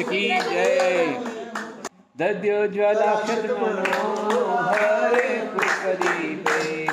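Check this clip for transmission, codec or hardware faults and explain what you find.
No transmission, codec or hardware faults turn up in this clip.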